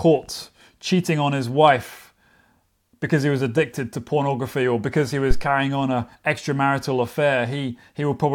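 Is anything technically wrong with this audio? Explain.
Yes. A phantom power thump occurs from 5.31 to 5.46 s in this speech clip. Phantom power was switched on or off on a live input. The voltage step passed through the coupling capacitors as a deep thump, peaking at about -5 dBFS and decaying within roughly 34 ms.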